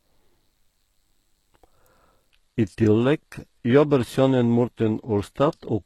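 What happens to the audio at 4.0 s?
Dull speech with nothing above 12.3 kHz runs from 2.31 s to the end, as the adaptive stream switches suddenly to a lower bitrate.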